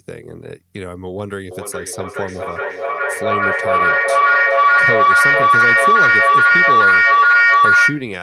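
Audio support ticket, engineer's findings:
Feedback howl, 1.51 s to 8.17 s. Tone builds to about 12 dB above speech, near 1.5 kHz, pulsing roughly every 0.4 s. Probable component: two endpoints sharing one room, mic to speaker to mic loop above unity gain. Spectrogram: thickening horizontal line near 1.5 kHz, periodic brightening. Waveform: envelope swelling, then pinned high until end.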